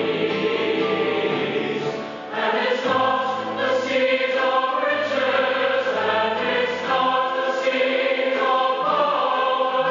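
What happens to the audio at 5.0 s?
Nothing goes wrong at 5.0 s; the audio plays through that moment intact, with no dropout, click or distortion.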